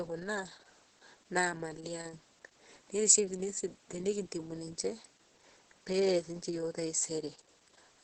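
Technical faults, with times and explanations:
Throughout, Opus voice compression: the speech has nothing above about 8.6 kHz, the wideband limit of SILK, the linear-prediction coder Opus uses for voice. The heavy damage fits a very low bitrate, around 10 kbps, where the excitation is coded coarsely, leaving speech muffled, hoarse and slightly robotic. A spectrogram shows a hard, flat ceiling near 8.6 kHz with empty space above, and smeared, grainy harmonics below it.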